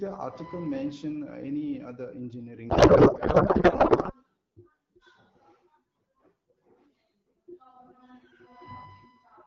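A codec payload misread runs from 2.69 s to 4.13 s. For about a second and a half, the speech dissolves into garbled noise and warbling tones that barely track it. The decoder seems to be unpacking the AMR-WB frames in the wrong layout, most likely octet-aligned payloads parsed as bandwidth-efficient, so every field lands in the wrong place. Outside that span, the HD Voice coding sounds clear, as expected around 12.65 kbit/s.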